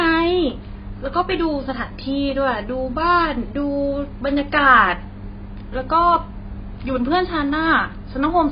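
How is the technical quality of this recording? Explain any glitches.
The technical quality is poor, limited by heavy lossy coding across the whole clip. The speech has AAC compression artefacts throughout: nothing above 5.2 kHz, leaving it dull, with smeared, warbling sibilants and vowels. This is likely an AAC-LC encode at a very low bitrate, where the encoder drops the high band and coarsely quantises the remaining spectrum.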